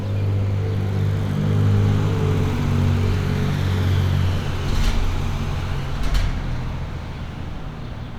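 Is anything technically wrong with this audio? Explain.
No, nothing is technically wrong with this audio.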